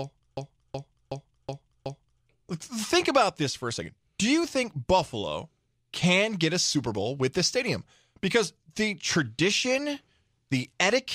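A speech recording with a system hang loop from 0.37 s to 2.23 s. A single 371.52 ms slice of audio repeats exactly five times, giving a rhythmic stutter at about 2.69 Hz rather than a buzz, because the looped segment is long. The sound hardware kept replaying its ring buffer while the host or driver stalled. The loop length fits a 16384-sample buffer, and essentially no audio seems to be lost once playback resumes.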